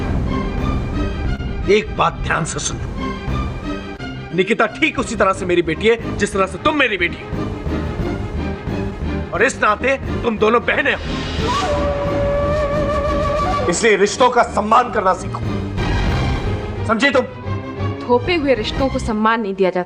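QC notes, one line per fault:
Throughout: clock drift between sender and receiver. The sender's clock runs about 1% slow, so the receiver's buffer keeps draining and must be refilled with repeated material.
1.36–1.41 s and 3.97–4.00 s: short stalls from a late packet. The buffer ran dry and the last sound was held for 29 ms, then 18 ms. Nothing is lost, but the sound briefly hangs.
4.29–19.17 s: repeated timing corrections. Short pieces are repeated to keep pace with the slow sender, adding roughly 150 ms overall. Playback runs at 99% speed, giving small, unevenly spaced hiccups.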